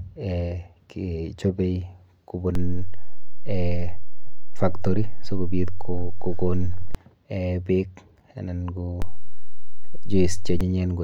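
At 2.55 s the speech suddenly sits on a DC step: the waveform's zero line jumps to an offset of about -16 dBFS, holds, and returns at 6.95 s. A second DC step of about -15 dBFS runs from 9.02 s to 10.61 s. Each jump and return produces a low thump while the speech continues unchanged. On the waveform the whole trace lifts off centre. A spectrogram shows brief low-frequency smears at each transition.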